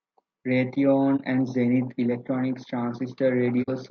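Low-delay AAC compression runs through the whole speech clip, and this is the likely cause of its rough, grainy texture. A low-delay coder such as AAC-ELD works on very short frames, which separate the pitch harmonics poorly and spend bits less efficiently. The damage is plainly audible here: noise fills the gaps between harmonics and the top band sounds thin and synthetic, which fits a bitrate of around 32 kbps.

AAC frame loss with muting occurs from 1.16 to 1.21 s and again from 3.62 to 3.69 s. Each time, the decoder had nothing for a stretch of audio and zeroed its spectrum, so the sound briefly drops out. The first gap lasts about 30 ms, consistent with a single lost frame. The second lasts about 60 ms, pointing to two in a row. The overlapping windows fade each hole in and out, leaving soft edges.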